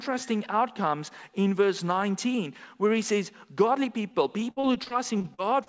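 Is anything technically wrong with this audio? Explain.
Yes. Repeated packet loss (robotic sound) runs from 4.12 s to the end of the clip at 5.68 s. Over this last stretch, packets went missing or arrived late eleven times, with the longest gap about 55 ms. Each hole was papered over by extending the preceding sound, and about 17% of the span ends up concealed. Since each gap follows soon after the last, the audio turns choppy, with fragments audibly lost. The sound was carried over a G.722 call path, consistent with roughly 64 kbps, so nothing reaches above 8 kHz.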